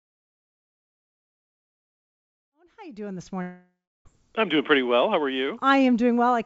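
At 3.42 s, just after "you doing this", the speech breaks off. The last sound carries on as a buzz or hiss that fades out. About 0.34 s of near-silence follows. Speech returns at 4.07 s with "I'm doing pretty well". About 0.64 s of audio is simply gone. The cause is likely a long network dropout, with the receiver papering over the gap. Throughout, nothing sounds above 8 kHz, which fits the G.722 call codec.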